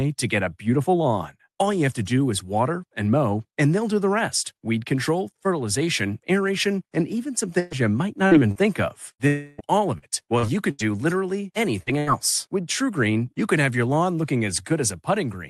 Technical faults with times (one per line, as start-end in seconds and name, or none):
7.59-7.74 burst of packet loss
8.27-8.58 short concealed packet loss
9.11-9.22 burst of packet loss
9.27-9.61 long network dropout
9.98-10.82 repeated packet loss (robotic sound)
11.83-11.89 short concealed packet loss
11.98-12.10 burst of packet loss